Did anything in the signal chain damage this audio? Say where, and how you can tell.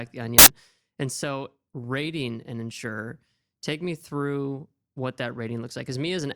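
Yes, at sample-format conversion. From 0.39 to 0.47 s the speech becomes loud, harsh broadband noise. Samples were built from the wrong bytes, so the noisy low bits dominate.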